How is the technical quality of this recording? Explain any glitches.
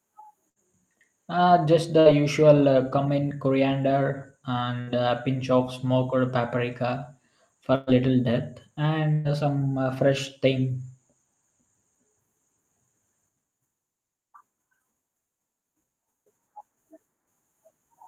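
The recording has five short dropouts from a burst of packet loss, at 0.49, 2.00, 4.81, 7.75 and 9.13 s. At each, a run of audio never arrived in time, so the receiver stretched the last received sound and faded it, giving a brief held buzz or hiss. Speech then resumes with a slice missing: about 60 ms at the first three, about 120 ms at the last two.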